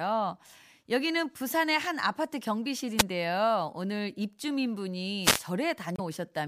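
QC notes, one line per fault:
2.98–3.03 s and 5.22–5.42 s: wireless microphone noise hit. The FM radio link fades as reflected signals cancel, so receiver noise swells over the speech as a brief swish of static, about 50 ms at the first point and 0.2 s at the second. A spectrogram shows broadband vertical smears of hiss covering the speech harmonics.
5.95–6.00 s: damaged data in a compressed stream. Corrupted bytes in the encoded stream make the decoder misread frames and lose sync while it hunts for the next header, giving a short glitch of about 54 ms. The waveform shows an abrupt discontinuity, and the spectrogram an odd blocky patch.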